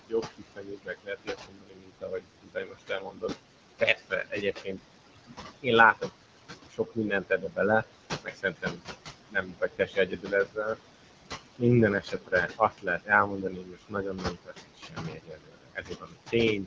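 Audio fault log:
Throughout, noise suppressor artifacts: the room noise is pulled down by about 21 dB between phrases and swells back under the voice. Unlike a steady noise floor, it pumps in step with the speech.
0.09–3.36 s, 3.8–4.8 s, 5.27–6.1 s, 6.66–7.85 s, 8.24–8.84 s, 9.2–10.79 s, 12.01–16.66 s, speech cut by the noise suppressor: soft consonants and word endings are mistaken for noise and dip by up to about 22 dB, for a few seconds in the first and last stretches and about a second or less in the others. They sound swallowed, and the background fades along with them.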